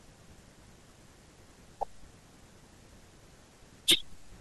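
Speech recording with no audible technical faults.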